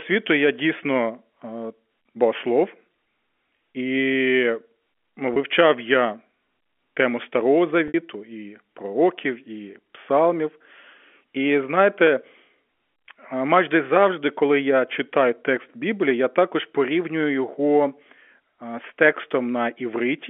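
Packet loss with pitch repetition hits this telephone-band speech at 5.34–5.36 s and 7.88–7.94 s. In each gap the receiver loops the last pitch period. The brief first gap sounds like a buzzy hold. The 60 ms second gap fades toward silence before "і пророків і псалмів" cross-fades back in. That length fits about three lost packets. G.711 narrowband coding still limits the audio to roughly 250 Hz to 3.4 kHz.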